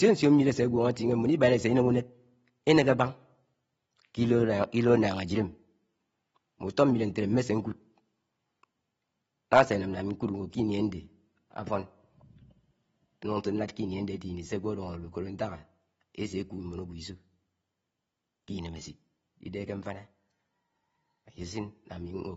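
From the start, the speech is dull and band-limited, with nothing above about 7.7 kHz and a smeared, warbling edge on sustained vowels and sibilants. The codec damage is plainly audible and is likely AAC compression at a low rate. The cut-off and spectral thinning fit AAC-LC at around 24 kbps, where the encoder discards high bands and coarsely quantises what remains, leaving a fizzy, hollow texture.

From 0.11 s to 22.35 s a faint, regular ticking runs under the speech at roughly 20 per second, one tick about every 50 ms, fast enough to read as a soft rattle on louder, sustained passages and gone in pauses. These are clock slip clicks, likely from two unsynchronised clocks differing by something on the order of 400 ppm. Each tick fits a single sample being dropped or repeated as the drift accumulates.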